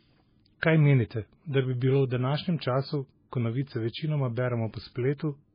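Throughout, the speech sounds watery and swirly, with nothing above 5 kHz, likely from heavy MP3 compression at a very low bitrate, around 16 kbps.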